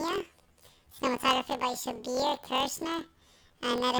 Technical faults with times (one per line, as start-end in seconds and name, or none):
0.00-3.99 planar audio read as interleaved